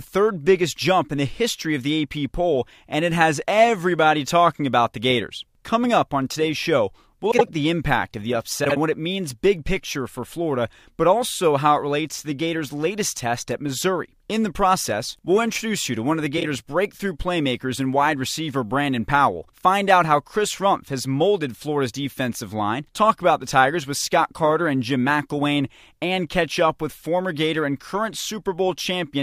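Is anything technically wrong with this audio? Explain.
Yes. Frames out of order at 7.31–7.49 s, 8.64–8.77 s and 16.37–16.45 s. Two neighbouring blocks of about 78, 52 and 26 ms play swapped, causing a garbled flutter with no time lost. Waveform and spectrogram show abrupt discontinuities at each join.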